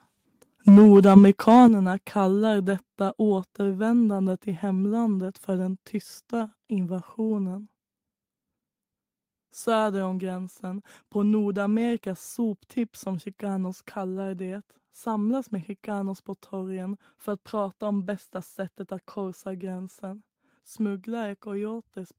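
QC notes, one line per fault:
0.67–1.66 s, microphone overload: the loudest syllables turn harsh and crackly, likely because the input gain pushed peaks about 4 dB past the converter's limit. The waveform shows flat-topped peaks on roughly a tenth of samples, and the spectrogram shows broadband splatter above them.
0.69 s and 1.68 s, microphone volume stepped down: voice and background both drop abruptly, about 2 dB then about 7 dB, likely the call software cutting input gain after detecting clipping. The waveform envelope shrinks in two sharp steps, and the spectrogram dims uniformly across all frequencies at each step.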